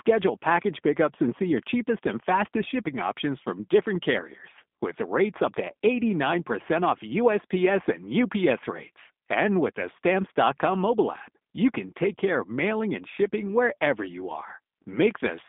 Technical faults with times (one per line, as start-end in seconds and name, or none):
0.00-15.49 G.729 codec